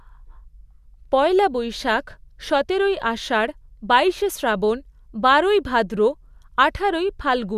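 Speech recording with no audible technical faults anywhere.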